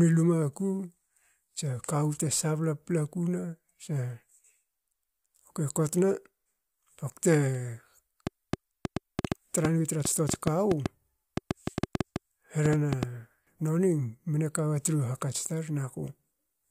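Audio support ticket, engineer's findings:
Train of clicks, 8.27–13.04 s. About 30 similar clicks, roughly 5 per second, irregular spacing. Peaks stand well above the speech, audible in pauses too. Likely a faulty connection or power supply or nearby equipment injecting repeated pulses.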